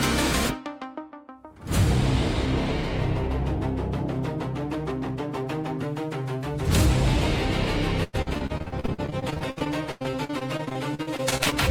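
From 8.03 s to 11.54 s the audio suffers repeated packet loss with a robotic sound: dozens of short dropouts, the longest about 100 ms, each patched by stretching the preceding sound. Roughly a third of the stretch is concealed, giving a choppy texture with pieces missing.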